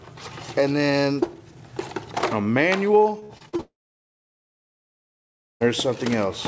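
From 3.20 to 3.61 s the audio turns choppy, with five short holes, the longest 44 ms, and roughly a third of that stretch filled in. This is repeated packet loss with a robotic sound: the receiver keeps patching each missing packet by stretching the last sound.

Straight after, from 3.61 to 5.62 s, the sound smears into a brief fading buzz and then goes silent for about 1.9 s before audio resumes with that two-second stretch simply gone. This is likely a long network dropout, where nothing arrived and concealment gave way to silence. Throughout, the call-codec path leaves nothing above 8 kHz, which fits G.722.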